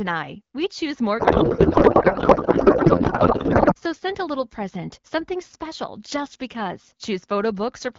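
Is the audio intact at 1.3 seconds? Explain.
No. At 1.3 s the clip is inside a codec payload misread running from 1.20 to 3.75 s, just after "choose more". Octet-aligned AMR frames are being parsed as bandwidth-efficient, so fields land in the wrong places and the speech is replaced by garbled noise and warble that barely tracks it.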